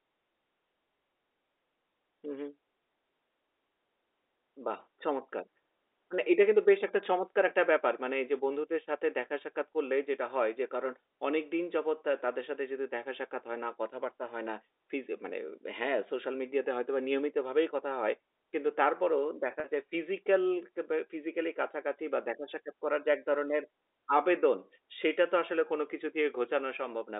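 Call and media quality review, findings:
Packet loss with pitch repetition, 19.60–19.64 s: 40 ms gap, consistent with two 20 ms packets. Receiver repeats last pitch period, producing a briefly held, buzzy sound on the G.711 telephone-band line.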